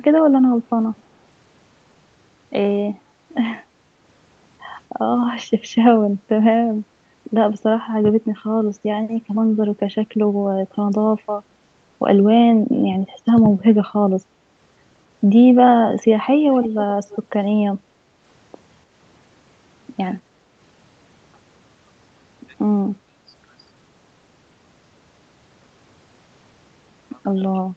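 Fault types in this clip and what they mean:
Echo leak: A faint delayed copy of the speech, about 25 dB down, returns roughly 0.3 s late around 17.1 s, likely from a loudspeaker echo the canceller missed.
Background gated by the echo canceller: The room sound dips by about 6 dB between 17.87 and 18.16 s, briefly, as the canceller clamps the microphone.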